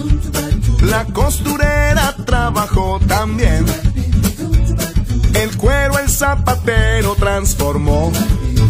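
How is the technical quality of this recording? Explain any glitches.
The technical quality of this recording is sound, with no glitches to explain.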